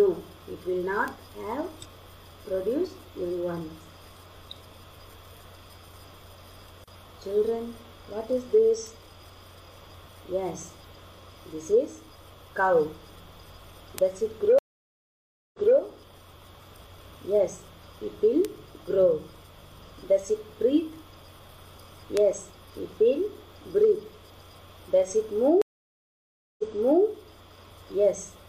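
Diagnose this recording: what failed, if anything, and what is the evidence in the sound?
Sharp isolated ticks at 1.08, 8.87, 13.98, 18.45 and 22.17 s are bit error spikes: single flipped bits on a digital link or storage briefly jolt one to three samples.

Silences of 0.95 s at 14.59 s and 0.97 s at 25.62 s, each resuming 0.23 s and 0.46 s earlier, mark stream reconnects at the network stage, with a fresh decoder.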